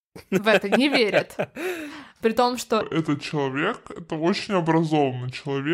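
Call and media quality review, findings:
Section at the wrong speed, 2.81 s to end of clip, right after "том что": speech slows to 0.71x and pitch falls about five semitones. Likely a clock mismatch in resampling or playback. Pitch and tempo drop together, unlike a pure pitch-shift, where timing holds.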